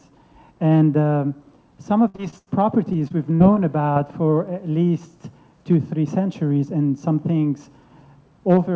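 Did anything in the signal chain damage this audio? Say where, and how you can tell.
Yes. The network stage failed, with repeated packet loss (robotic sound) from 2.08 to 2.49 s and again from 2.93 to 3.58 s. Each stretch had four dropouts, the longest about 85 ms and 41 ms. The decoder kept extending the last sound to fill them, which gives a choppy sound with pieces missing.

A single short concealed packet loss at 3.94 to 3.98 s is also network damage. About 20 ms never arrived, and the receiver bridged the gap with synthesized continuation before blending back. This leaves a brief smear. The G.722 call path at 64 kbps stops everything above 8 kHz.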